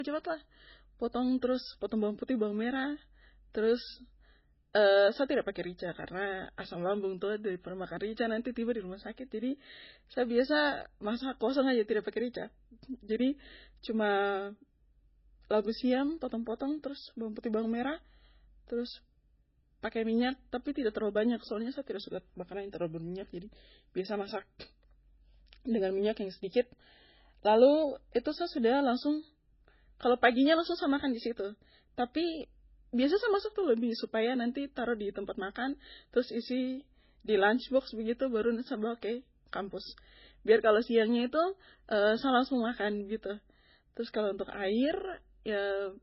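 Speech, with one fault running throughout. Nothing is heard above 5.6 kHz, so the sound is dull and narrow. The cause is likely low-bitrate audio saved at a high bitrate. The cut-off fits an MP3 near 16 kbit/s, later re-encoded at a much higher rate. Re-encoding cannot restore the missing top.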